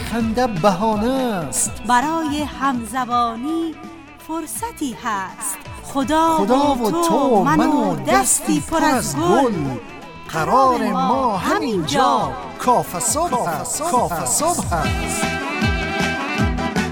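A sudden gain jump runs from 2.79 to 5.39 s: the sound and its background noise drop together by about 4 dB at once and later return to their earlier level. The likely cause is a digital gain change applied between adjacent samples, without any ramp.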